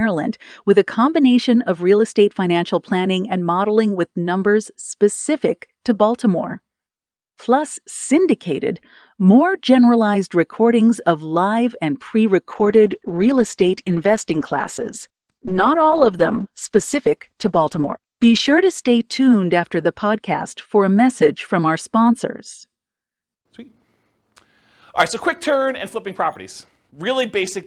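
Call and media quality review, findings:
Call bitrate drop after "of live and pre", 12.48 to 21.85 s: encoder cut from 48 to 13 kbps, speech coded coarser, bottoming out about 5.8 s, recovers by 21.85 s.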